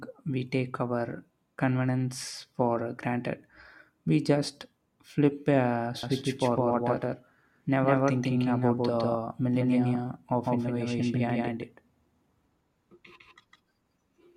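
From 6.03 s, after "just flip a", a doubled audio track runs to the end: a dry, equally loud copy roughly 150 ms behind, likely a second capture path. It starts abruptly, without an echo's decay or room colour.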